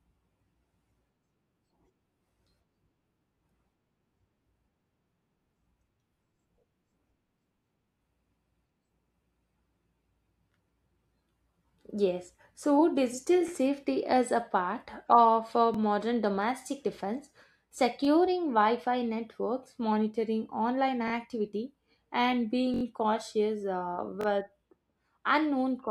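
Repeated buffer stutters come at 13.48–13.50 s (after "so digital"), 15.74–15.77 s (before "domestic defense"), 18.05–18.07 s, 21.08–21.12 s, 22.74–22.83 s (before "cautious uh") and 24.21–24.26 s. Each time the device replays its last 21 ms chunk, which fits a 1024-sample buffer: once, then twice, and four times at 22.74 s. The result is a brief buzzy stutter with hard joins. Unlike a dropout, no sound goes missing and there is no silence.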